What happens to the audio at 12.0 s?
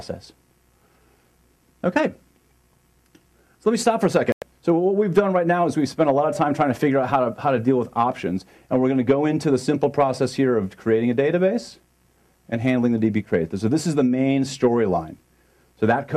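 Nothing goes wrong at 12.0 s: the audio plays through that moment intact, with no dropout, click or distortion.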